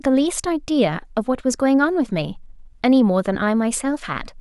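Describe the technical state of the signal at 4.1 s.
At 4.1 s the signal is intact, with no audible fault at that moment.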